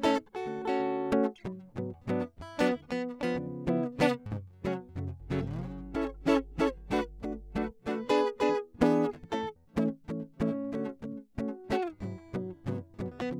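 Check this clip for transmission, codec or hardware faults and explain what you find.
One fault is present: mains hum. From 5.2 to 7.71 s, a steady low tone at 50 Hz sits under the music, roughly 15 dB below it. A ground loop or nearby transformer is feeding the power line into the signal. It sounds like a constant buzzing drone.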